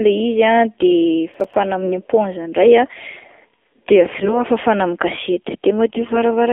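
AMR narrowband mobile codec, throughout: the whole clip has passed through the AMR-NB speech codec at 7.4 kbps. It rebuilds speech from a vocal-tract model excited by a sparse set of pulses, and the low rate makes the voice sound buzzy and synthetic. The line band runs from 250 Hz to 3.5 kHz, so the low warmth and everything above that top edge are gone, leaving a thin, boxed-in telephone sound with plainly audible coding damage.

Processor overload crackle, 1.34 to 1.54 s: for about 0.2 s the processing could not finish its short audio buffers on time. Each missed deadline was filled with silence. The tiny hard-edged dropouts come so close together that they fuse into a gritty, tearing crackle over the speech. Their spacing fits buffers of roughly 5 ms, with a handful missed in a row. The crackle stops as soon as the load clears.

AMR bit errors, 1.80 to 1.96 s, 4.14 to 4.41 s (ending just before "ah fafana amin'ny") and 5.87 to 6.18 s: in each burst, the less protected bits of the codec frames arrived corrupted. 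The essential bits still passed their check, so the frames were decoded anyway, with excitation pulses in the wrong places and slightly wrong pitch, gain and spectral values. The voice keeps its rough pitch and loudness but turns hoarse, scratchy and gargly. The middle burst sounds the most damaged, and the last one lasts longest.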